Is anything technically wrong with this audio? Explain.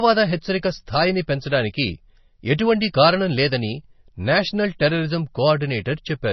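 Yes. Throughout the speech there is heavy damage that is likely MP3 compression. Nothing survives above about 5.9 kHz, and the remaining sound has a watery, swirling texture, with sibilants turning metallic and consonant onsets smeared. Short of bits, the encoder cuts the treble at a fixed point and drops weak frequency lines, which then flicker on and off between frames. That fits a very low bitrate, around 24 kbps. A simple low-pass filter would dull the top end but would not swirl.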